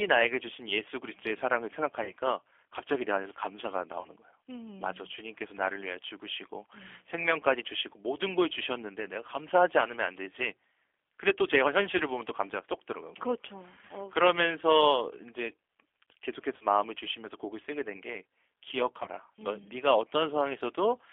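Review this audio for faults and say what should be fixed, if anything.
The G.729 codec runs through the whole speech clip. The band stops at about 300 Hz and 3.4 kHz, and the roughness of the 10 ms frame-by-frame filter-and-pulse reconstruction is plainly audible, which fits the 8 kbit/s G.729A variant. To prevent it, negotiate a wideband codec such as G.722 or Opus on this link.

VoIP packet loss concealed by the speech codec occurs at 2.04–2.12, 4.01–4.09, 11.98–12.02, 13.87–13.91, 16.57–16.66 and 19.03–19.07 s. Gaps of 40 ms and 20 ms, consistent with one or two 20 ms packets, were filled by extrapolating the last pitch and filter. This produces a buzzy, fading smear that lingers as the decoder recovers. To prevent it, reduce network loss with QoS prioritisation and an adequately sized jitter buffer, or add forward error correction.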